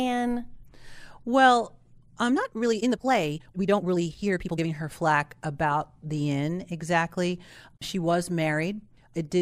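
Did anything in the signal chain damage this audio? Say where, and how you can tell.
Yes. Between 2.27 and 4.67 s the speech abruptly runs at about 1.82 times its normal pace, sounding rushed, before settling back just ahead of "her flack about the". This is a time-stretched section, likely from software that squeezed that stretch to fit a shorter length by dropping short pieces. The pitch stays put throughout, which separates it from a sample-rate mismatch or speed-changed playback, where rushed speech would also rise in pitch.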